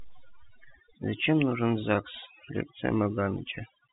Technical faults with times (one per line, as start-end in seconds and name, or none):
0.00-3.93 overdone noise removal